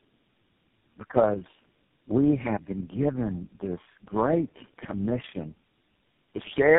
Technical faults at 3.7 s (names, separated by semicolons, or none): tandem speech coding